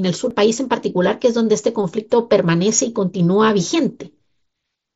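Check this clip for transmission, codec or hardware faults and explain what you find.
One fault stands out: a CD skip at 0.30 s. At that moment the audio cuts out for a few milliseconds with a small tick, then resumes from a different point in the speech rather than where it left off. The disc player's laser lost its track, from a knock or a surface flaw, and landed on another turn of the spiral. The player muted briefly while relocking and continued from that new position, so the timeline jumps discontinuously. The speech's bandwidth stops at 8 kHz and loud passages carry a faint grain, both normal for the mSBC Bluetooth headset codec that carries the clip.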